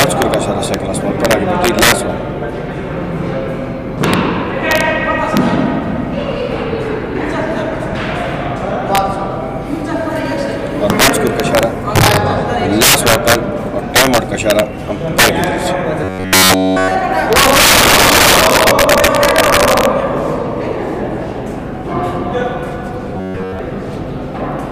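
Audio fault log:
Throughout: integer overflow. The level is pushed about 10 dB past full scale, and instead of being limited, the loudest peaks (roughly 2 percent of samples) wrap around to the opposite extreme. That's why loud moments give harsh, violent cracks rather than the softer flattening of clipping.
16.04–16.95 s and 23.17–23.59 s: robotic sound from repeated short buffers. The sound turns into a rigid metallic buzz at 93.8 Hz. This is likely caused by a roughly 10.7 ms chunk being replayed while fresh audio is skipped. The first stretch is repeated almost entirely, and the second is repeated for about 70 percent of its length.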